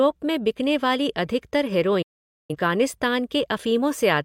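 At 2.02 s, right after "में बिकने वाली अधिकतर", the speech drops out in a digital broadcast dropout: the receiver stopped getting valid frames and muted, with a very quick fade of about 8 ms, until good frames returned at 2.56 s. Roughly 470 ms of programme is simply gone, which fits about eleven lost frames. Unlike packet-loss concealment, nothing fills the hole: there is true silence, and speech resumes later in the programme rather than where it stopped.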